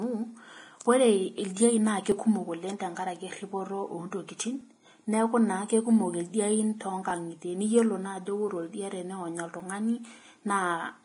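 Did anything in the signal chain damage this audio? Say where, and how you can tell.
Yes. Vorbis compression runs through the whole clip, most likely introduced at the codec stage. Nothing is present above 10.6 kHz, and the treble is grainy and hissy, with roughened speech tones. That heavy damage fits a low bitrate around 30 kbps, where fine detail is quantised into noise.

Audio missing between chunks occurs at 2.12, 4.61, 7.10 and 9.60 s. These are tiny skips, a few milliseconds each, spaced about 2.5 s apart. The likely cause is a buffer or recorder dropping a sliver at each chunk boundary and butting the two sides together without any gap.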